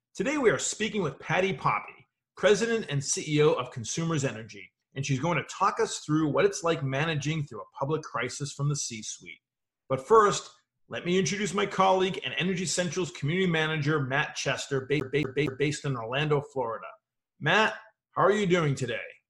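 A CD stuck on one turn appears from 15.00 to 15.70 s, where the audio stutters in a fast, even loop. A scratch keeps knocking the laser back one track at the same point on each revolution, so a single 233 ms slice of sound plays three times in a row, each repeat broken by a brief mute at the jump. The result is the regular, mechanical hiccup of a skipping disc.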